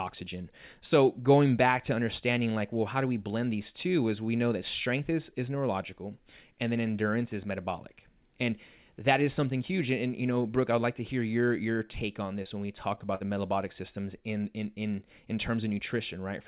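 From 12.43 to 13.23 s, just before "metabolic systems in in", the speech turns choppy and robotic from repeated packet loss. Several short holes, the longest about 52 ms, are patched by stretching the last sound, so about a seventh of this stretch is filler. The telephone-band call path cuts everything above 4 kHz.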